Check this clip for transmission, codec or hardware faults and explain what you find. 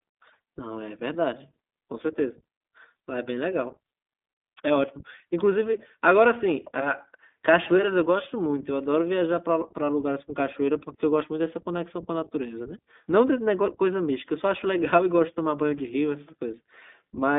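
The speech runs through a narrowband voice codec, the iLBC codec, for the whole clip. It sounds thin and boxed-in, with a slightly rough, synthetic edge that is plainly audible. The top end stops sharply, with nothing above 3.8 kHz and the useful band sitting between about 200 Hz and 3.6 kHz. The coder rebuilds each short block of excitation on its own, and the roughness fits 20 ms frames at a low rate around 15.2 kbps.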